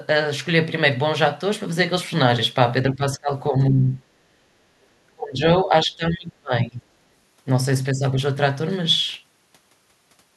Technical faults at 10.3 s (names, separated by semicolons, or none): none